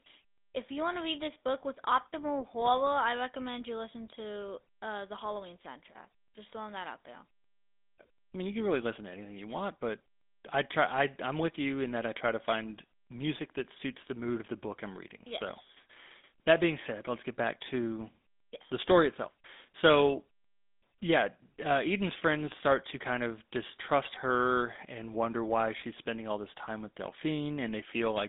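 From start to finish, the speech carries the sound of the GSM full-rate codec. Energy stops near 3.8 kHz, with the line band roughly 200 Hz to 3.6 kHz. Pulse-driven excitation leaves a plainly audible buzzy, gravelly roughness. This fits a 13 kbps GSM stream.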